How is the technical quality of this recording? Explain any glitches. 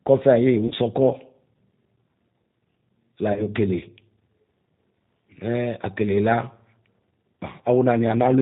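Quality is fair but clearly compromised: the whole clip has been through a narrowband VoIP codec, and there are two short dropouts.

The G.729 codec damage runs throughout. Everything above 4 kHz is gone, so the speech sounds boxed-in and a bit rough and synthetic. That texture comes from the decoder rebuilding the voice from a vocal tract filter, a pitch predictor and a few pulses per frame rather than the actual waveform, which fits an 8 kbit/s G.729A stream.

The packet loss concealed by the speech codec hits at 0.68–0.74 s and again at 3.33–3.46 s. Each time, about 30 ms of audio went missing, which fits three lost 10 ms frames. The decoder papered over the gap by repeating its last pitch and filter at falling gain, so you get a brief buzzy tone or coloured noise that fades. The voice stays weak or distorted for a moment after it returns.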